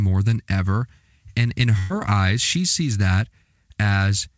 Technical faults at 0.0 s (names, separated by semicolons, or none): none